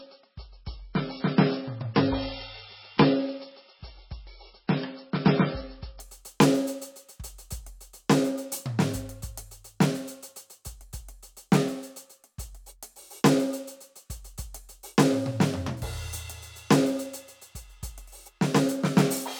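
From the start to 6.0 s the music plays through an adaptive stream starting at a low bitrate. The player opened on a cheap version to begin quickly, and nothing reaches above about 5.6 kHz, so the top is dull and smeared with codec artefacts, which suggests a very low bitrate of around 16 kbit/s. At 6.0 s the treble returns abruptly and the artefacts ease, with no silence or stutter, unlike a network dropout.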